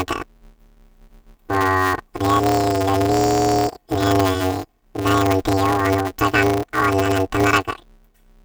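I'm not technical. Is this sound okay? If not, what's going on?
No. Throughout the speech there's planar audio read as interleaved: a steady robotic buzz around 188 Hz, consistent with 256-sample blocks, with no octave jump as in pitch shifting.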